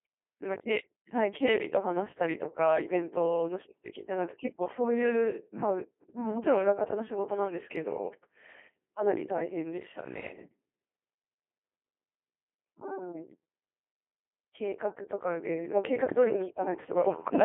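From start to finish the speech sounds robotic and buzzy, squeezed into a narrow band from about 250 Hz to 3.4 kHz. That is heavy Codec 2 vocoder damage, consistent with a 2.4 kbit/s mode. Only pitch, voicing, energy and spectral shape survive, and sine-wave resynthesis replaces the real waveform.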